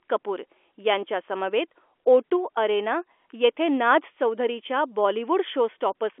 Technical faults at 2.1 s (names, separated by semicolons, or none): none